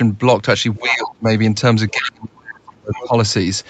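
From 0.76 to 0.96 s a second, fainter voice sits under the speech at roughly 10 dB below it. This is other side's voice leaking through: the far end was likely played on a loudspeaker, and the echo canceller failed to strip it from the microphone signal. Almost at once, from 0.79 to 1.28 s, the talker's speech sinks by as much as about 25 dB for around half a second. That is speech suppressed in double talk: with both sides talking together, the canceller likely could not separate the local voice from the echo and turned everything down.

The leak returns briefly at 1.89 to 1.96 s, much quieter at about 25 dB down. From 1.92 to 3.14 s the speech is pushed down again, by up to about 35 dB, across roughly a second in total. Within that stretch a third scrap of echo comes through at 2.94 to 3.08 s, about 15 dB below the speech.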